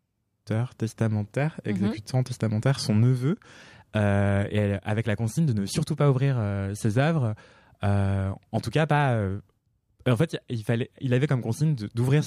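No technical faults can be heard anywhere in the recording.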